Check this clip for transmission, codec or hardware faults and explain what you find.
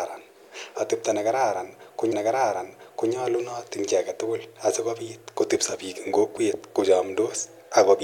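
There is one fault, a repeated stream segment. At 2.12 s, just after "ne kararan ko", about one second of speech plays a second time, running to 3.11 s, with a small blip where playback jumps back. The player fetched or queued the same stream segment twice, adding roughly 1.0 s to the programme.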